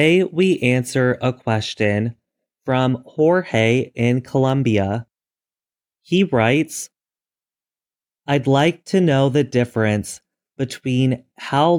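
Listening to this speech recording, nothing technical stood out.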